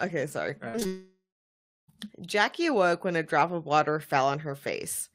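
Short concealed packet loss hits three times just after "okay sorry": 0.69 to 0.76 s, 0.80 to 0.83 s and 0.83 to 0.87 s. Each time a few hundredths of a second missed the decoder, which stretched the preceding sound to cover the hole, leaving a brief smear or wobble.

A long network dropout is the likely cause of the gap from 0.87 to 1.9 s. Nothing arrived for about a second, so the receiver kept extending the last sound as a fading buzz or hiss before about 0.69 s of silence. Audio resumes at 1.9 s, with that stretch lost.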